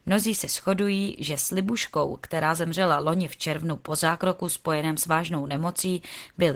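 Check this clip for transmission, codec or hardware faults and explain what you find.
One codec fault runs through the whole speech clip. Opus voice compression: throughout. Plainly audible coding damage, consistent with hybrid mode near 16 kbps. Linear prediction codes speech coarsely; a separate layer covers content above 8 kHz.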